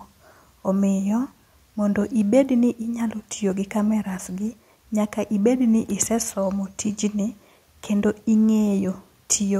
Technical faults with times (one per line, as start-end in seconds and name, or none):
none